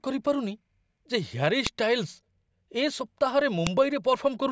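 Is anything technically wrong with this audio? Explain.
Yes. A file header played as audio causes sharp clicks at 1.67 and 3.67 s. Header bytes between joined 2 s speech pieces sound as a loud snap.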